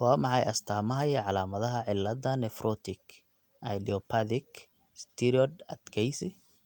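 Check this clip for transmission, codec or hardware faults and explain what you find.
Nothing faulty can be heard anywhere in this recording.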